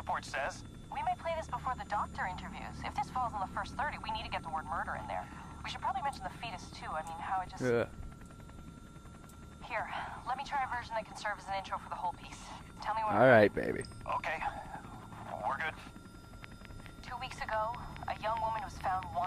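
From 16.44 s to 19.25 s the audio carries a train of clicks: around fifteen near-identical pops at a regular 4.64 per second, peaking roughly 10 dB above the sound. The even spacing and matching shape set it apart from random crackle, pointing to likely interference from nearby equipment.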